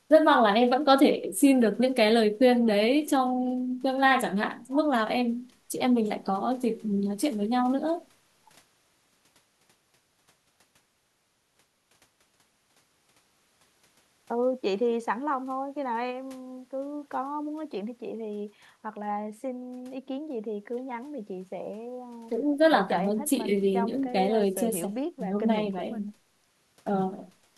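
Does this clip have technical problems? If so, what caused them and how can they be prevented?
No, there are no technical problems in this speech clip, so there is nothing to trace to a cause or to prevent.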